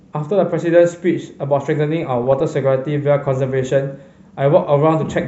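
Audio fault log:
2.03–2.41 s, DAB burbling: the speech gets a burst of burbling for under half a second. With weak reception, bit errors slip past error correction and scramble individual sub-band levels frame by frame, which fits a run of around sixteen damaged frames.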